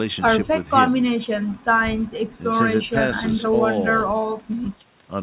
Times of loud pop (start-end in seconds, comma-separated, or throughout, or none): none